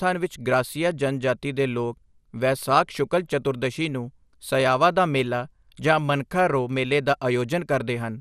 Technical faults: MP2 compression

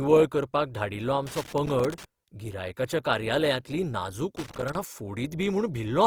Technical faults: Opus compression; loose connector crackle

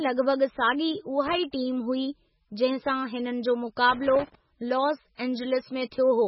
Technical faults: MP3 compression; loose connector crackle

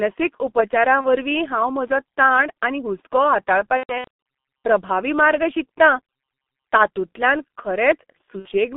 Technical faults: G.723.1 codec; VoIP packet loss concealed by the speech codec

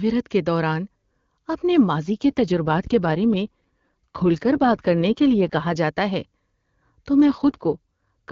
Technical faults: AMR rate drop

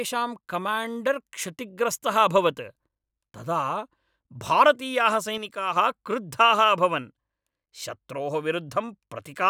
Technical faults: sudden gain jump

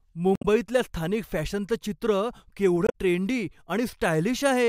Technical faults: damaged data in a compressed stream

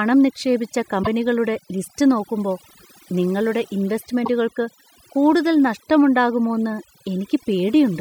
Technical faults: overdone noise removal; damaged data in a compressed stream

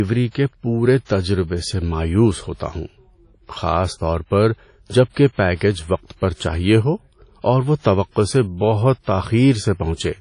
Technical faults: WMA compression

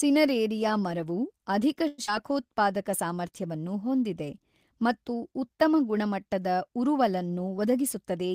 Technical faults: call audio freeze; short concealed packet loss; jitter buffer speed-up

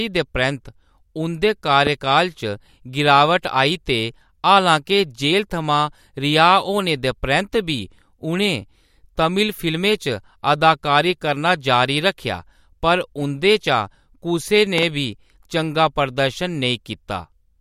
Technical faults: loud pop

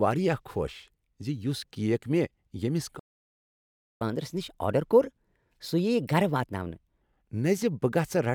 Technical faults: playback stall; catch-up at higher speed

